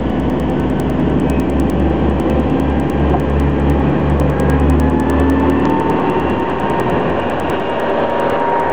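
Regular ticks at 10 Hz run through the whole audio wherever signal is present, the mark of a resampler restarted on every block: each 100 ms block is converted from 16 kHz to 48 kHz without its neighbours, leaving an error at every edge.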